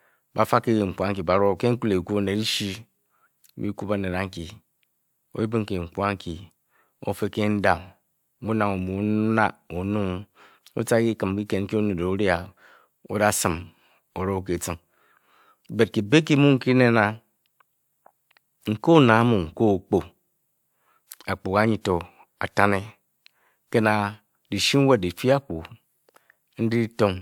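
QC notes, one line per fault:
No faults were found in this speech clip. Nothing here needs a QC entry.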